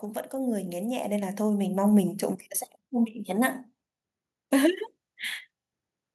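From 0.31 s to 2.51 s the speech grows steadily louder, a case of automatic gain rising. The automatic gain control judged the incoming level too low and ramped its gain up by about 10 dB across those 2.2 seconds. Because the gain acts on the whole signal, the room tone and background noise swell in step with the voice, so the noise floor climbs audibly alongside the speech.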